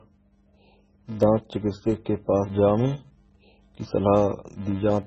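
From the first moment of the speech, a steady 375 Hz buzz rides on the signal and rises and falls with its level. This is a filter restarted on every block: the filter discards its internal state at each block boundary and begins again from zero, so every block opens with a small transient. The 375 Hz repetition rate fits a 128-sample block, and the buzz disappears in the gaps where the signal drops away.

Also present throughout is heavy band-limiting and smearing. Nothing is present above 7.8 kHz, the sound has a watery, swirling texture, s sounds turn metallic and chirpy, and onsets are blurred. This is likely MP3 compression at a very low bitrate, around 16 kbps. With so few bits available, the encoder removes the treble at a fixed cut-off and zeroes weak frequency lines, which then switch on and off from frame to frame.

From 1.23 s to 5.03 s, a regular click recurs about every 1.27 s, giving roughly four clicks in that span. 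The pattern points to clock drift buffer slips. Two devices running on separate clocks, mismatched by something on the order of 150 ppm, let the buffer between them creep until a handful of samples is dropped or repeated. Each of these slips breaks the waveform and is heard as a short tick at that steady interval.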